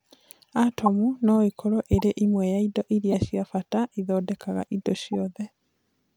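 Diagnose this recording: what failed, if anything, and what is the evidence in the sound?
Short, harsh chirps and bursts of noise cut through the speech at 0.86–0.88 s, at 1.93–2.03 s (after "no ĩkorũo", before "ĩmwe ya indo"), at 3.12–3.22 s (before "cia bata ithondekaga indo") and, much quieter, at 5.13–5.15 s. The first three peak around -10 dBFS. These point to a corrupt frame decoded at the codec stage. Flipped bits in compressed frames were decoded anyway, so misread gains and codes placed energy at the wrong frequencies for a few frames each time.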